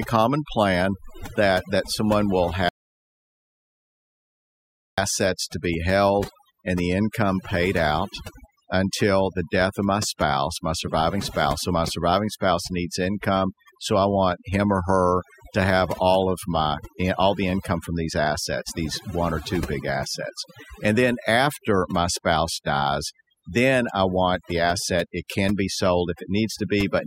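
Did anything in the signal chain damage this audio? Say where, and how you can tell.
Yes. Overdone noise removal runs through the whole clip, from a noise reduction stage in processing set far too strong. Between phrases the background sinks to near silence, dotted with twinkling specks. The reducer pushes individual frequency bands down whenever they sit close to its noise estimate. Quiet parts of the speech fall under that estimate, so they are cut along with the noise.

An audio dropout to silence runs from 2.69 s to 4.98 s, about 2.29 s of lost audio. The speech stops mid-flow and then resumes. The gap is silent, with no room tone at all. A real pause would still carry background. Dead silence means the recorder kept writing samples while nothing arrived. The likely cause is lost input at the capture end, such as a device disconnecting, a failed link or a brief mute.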